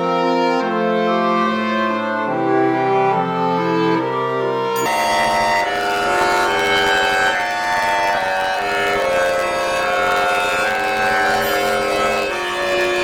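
From 4.86 s to the end, planar audio read as interleaved: each 10.88 ms block of all-left-then-all-right samples is taken as alternating pairs, so each block plays twice at double speed. Blocks this short produce a robotic buzz at about 91.9 Hz with no clear octave shift.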